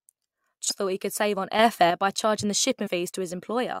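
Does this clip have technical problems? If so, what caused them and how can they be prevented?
Yes. A short disruption breaks into the speech at 0.70 s, and another follows from 2.86 to 2.88 s. Both are damaged data in a compressed stream. Where bytes in the encoded audio were lost or corrupted, the decoder misread those frames and lost sync. It then had to search for the next valid frame header, so a brief burst of garbled output replaced the proper sound. To prevent this, send the stream over an error-checked transport and verify stored files with checksums after every transfer.

From 1.59 to 1.90 s, the speech and the background noise step up together by about 6 dB, and the change arrives abruptly rather than fading in. This is a sudden gain jump. It was likely caused by a digital gain setting or bit shift taking effect between one sample and the next with no ramp, so the whole signal's level changed instantly. 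To prevent this, apply every gain change through a short smoothing ramp of a few milliseconds.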